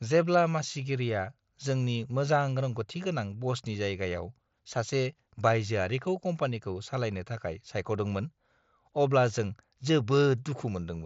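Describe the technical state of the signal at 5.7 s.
At 5.7 s the speech is intact, with no fault present, and it carries only the band limit of the Bluetooth mSBC headset link, with nothing above roughly 7.7 kHz.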